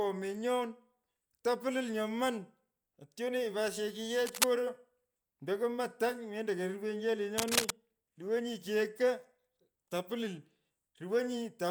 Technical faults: cable scratch noise

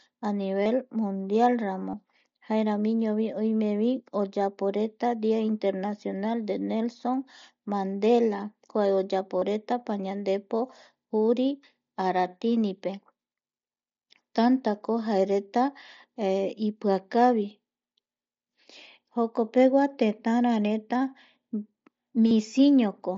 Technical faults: concealed Bluetooth headset packet loss

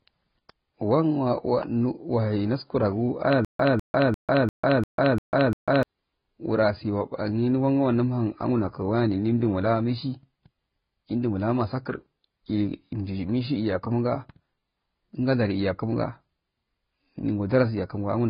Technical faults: transcoding between lossy codecs; stutter with silent gaps

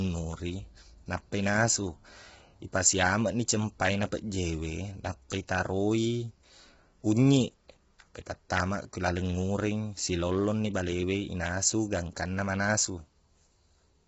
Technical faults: low-delay AAC compression

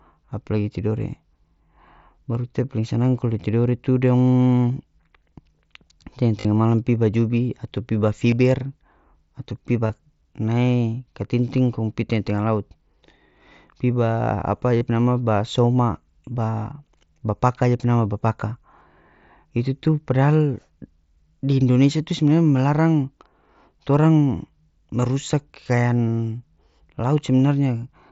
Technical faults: concealed Bluetooth headset packet loss

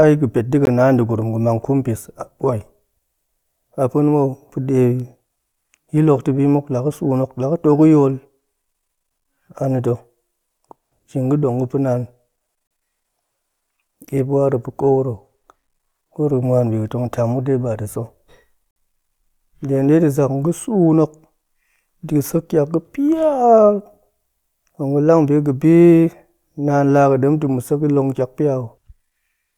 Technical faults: gap between stream segments

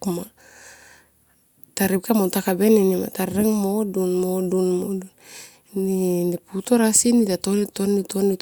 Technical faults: none

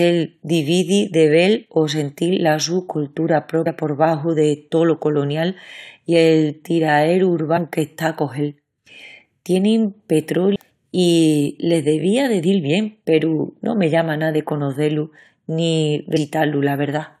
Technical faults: damaged data in a compressed stream

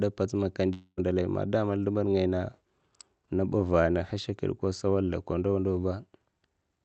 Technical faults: long network dropout

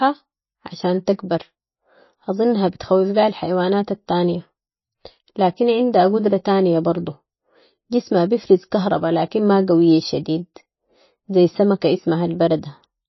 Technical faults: MP3 compression

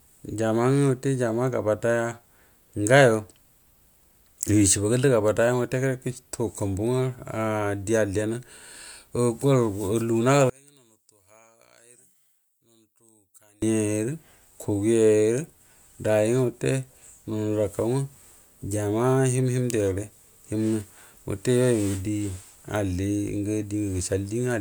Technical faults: one channel inverted

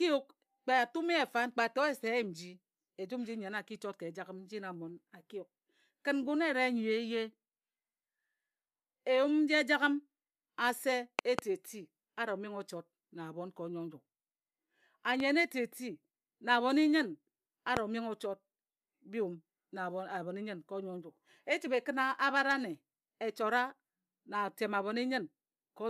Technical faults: loud pop

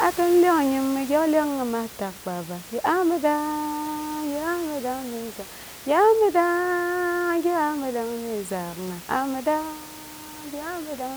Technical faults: none

